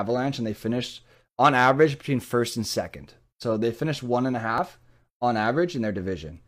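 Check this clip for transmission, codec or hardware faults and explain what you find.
One fault is audible, in this speech clip, at 4.58 to 4.61 s, just after "finished one and a": a small skip where about 32 ms of sound goes missing and the waveform jumps abruptly. This is an overlap between stream segments. Two consecutive segments, here about 4 s long, carried time stamps that overlapped, so the player trimmed the overlapping stretch as if it were duplicated, even though that audio existed only once.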